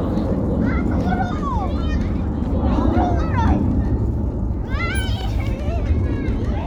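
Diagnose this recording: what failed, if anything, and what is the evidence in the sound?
Nothing failed; every stage handled this everyday sound correctly.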